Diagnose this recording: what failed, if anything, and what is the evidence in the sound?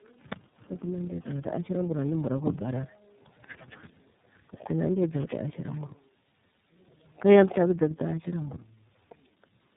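Codec stage: tandem speech coding throughout. The speech is rough, muffled and warbly, which fits two low-rate speech coders in a row, each re-coding the previous one's artefacts. A spectrogram shows nothing above 3.8 kHz, with smeared, blotchy harmonics and grainy gaps between them.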